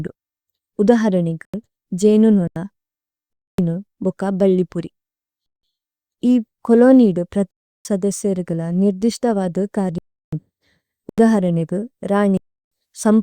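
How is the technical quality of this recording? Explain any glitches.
The recording is marred by repeated dropouts. Blocks of digital silence occur at 1.45, 2.48, 3.33, 5.46, 7.51, 9.98, 11.09 and 12.37 s, lasting about 85 to 340 ms. One falls just before "ബക്ക ബല്ലിപുരി" and another just after it. The lengths fit whole buffers of roughly 4,096 to 16,384 samples left unfilled and zeroed. Each one cuts abruptly to dead silence and back, and leaves an audible hole in the speech.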